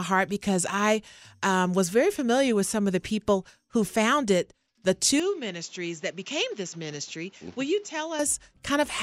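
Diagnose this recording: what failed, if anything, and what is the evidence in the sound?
At 5.20 s the speech abruptly loses its top end, with nothing above 7.6 kHz, and drops by about 5 dB, with no gap at the transition. A new noise floor appears around 30 dB below the speech and persists until 8.19 s, when full bandwidth and level return. This points to the capture stage: the input likely switched to a poorer device, whose narrower band, lower gain and own self-noise replaced the original microphone for those three seconds.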